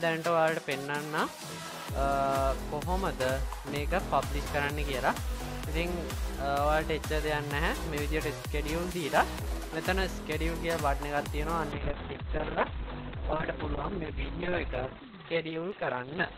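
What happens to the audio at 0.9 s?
Nothing goes wrong at 0.9 s; the audio runs through that moment intact, with no dropout, click or distortion.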